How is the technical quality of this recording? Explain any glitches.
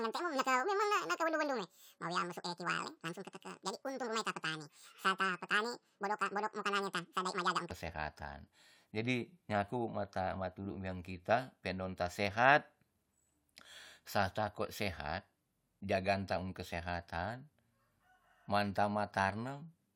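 The recording has one clear glitch at the start. A section at the wrong speed runs from 0.0 to 7.71 s, likely from playback fitted to the wrong clock. At 1.91 times normal speed, the speech sounds hurried and about ten semitones too high.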